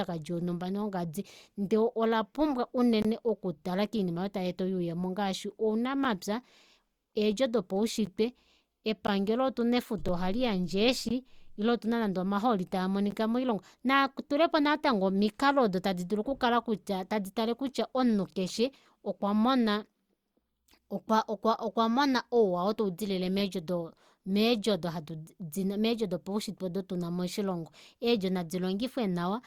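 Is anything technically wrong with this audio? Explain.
Yes. Gaps between stream segments cut brief silent holes at 3.02–3.05 s (between "ola pumbwa" and "oku tala koinima aayo"), 6.05, 8.06, 9.07, 10.08, 11.09–11.11 (before "ile outuna nande omahooli") and 13.11 s. Segment timestamps fall on a one-second grid but leave small gaps. The player fills these with silence. Each hole lasts about 4 to 23 ms and has hard edges. No speech is lost.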